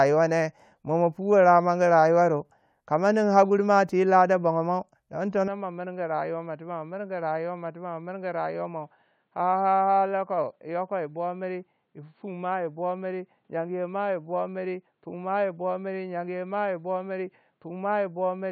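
From 5.48 s to the end, the speech abruptly turns dull and boxy, with nothing above 4.5 kHz, drops a few decibels in level, and picks up a faint new background noise, with no gap at the change, likely an input switched to a poorer device.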